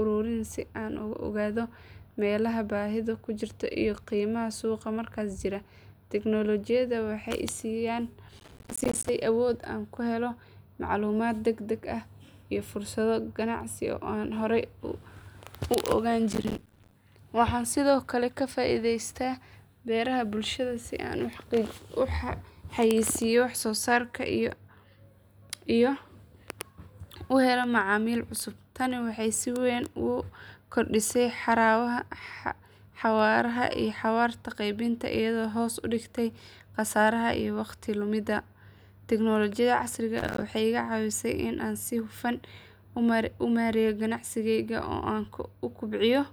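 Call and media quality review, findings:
Processor overload crackle in the speech at 8.38 to 9.09 s, 16.32 to 16.94 s and 40.18 to 40.42 s. Gritty tearing bursts. Audio path missing its buffer deadlines. Dozens of tiny silent gaps with hard edges, which fits buffers of around 5 ms.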